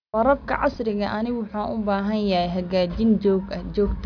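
The recorded speech carries no technical fault that a listener can pick out anywhere in the signal.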